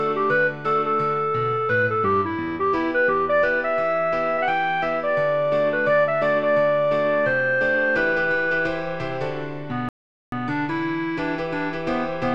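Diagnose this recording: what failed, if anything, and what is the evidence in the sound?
A playback stall cuts the sound off from 9.89 s to 10.32 s, a gap of about 430 ms, before it resumes. On a waveform this is a flat line; a spectrogram shows a blank vertical band. At the playback stage, the player likely ran short of data or its thread was blocked.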